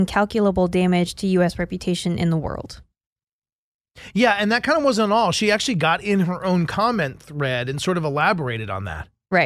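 No technical faults can be heard anywhere in the recording.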